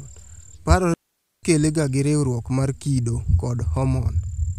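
At 0.94 s the sound drops into a clean, near-silent hole lasting about half a second, coming back at 1.43 s right before "ga gi riuruok mar". That's a digital wireless dropout: the receiver lost too much data and muted with a quick fade, so there's no noise burst either side.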